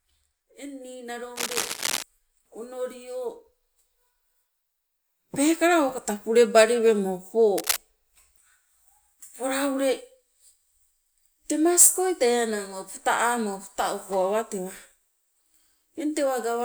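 A speech recording with two bursts of scratchy, rustling noise, from 1.36 to 2.04 s and from 7.58 to 7.78 s just after "pulebali wemo po", both nearly as loud as the voice. This cable scratch noise is likely a worn cable or connector being moved.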